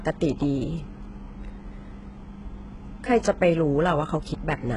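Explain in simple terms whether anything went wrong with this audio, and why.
Yes, something went wrong: the speech was squeezed hard by a low-quality audio codec, likely HE-AAC compression, which keeps only the lower sounds and fakes the treble by copying them upward. Across the whole clip, s sounds come out gritty and lispy, and nothing reaches above 11 kHz.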